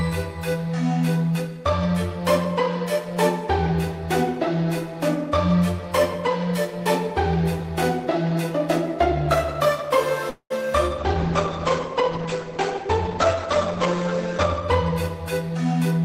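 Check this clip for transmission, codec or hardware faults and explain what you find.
Three network-related faults appear in the final six seconds of the clip.

A call audio freeze runs from 10.29 to 10.52 s. The sound stalls. The last moment is stretched into a fading tail, and about 80 ms of it drops to silence. Then the audio resumes exactly where it stopped. Nothing is lost. About 208 ms of extra delay is inserted. The likely cause is delayed packets leaving the jitter buffer empty, so the receiver had to fill the gap itself.

A call bitrate drop follows from 11.00 to 14.70 s. The sound turns coarse and muffled. It loses its top end and gains a rough, watery texture. This fits the encoder dropping from about 64 kbps to about 11 kbps after the call's bandwidth estimate fell. The audio bandwidth narrows from 20 kHz to 8 kHz. It stays at its worst for about 3.7 s before recovering.

A jitter buffer speed-up runs from 14.91 to 15.99 s. 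The sound plays about 11 percent fast, but the pitch stays the same. It comes across as hurried. The receiver held more audio than it wanted. To shrink that backlog, it cut many tiny pitch-period slices out in quick succession. Around 150 ms is removed in total.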